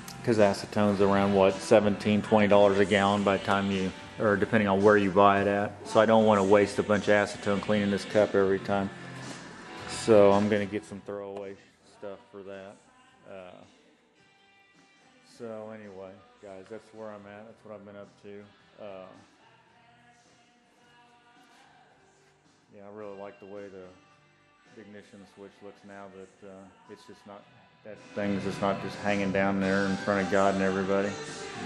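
Zipper noise at 10.36–11.26 s and 27.88–28.3 s: the level falls, then rises, about 20 dB in unsmoothed steps roughly fifty times a second, each step clicking into a rapid zipping buzz.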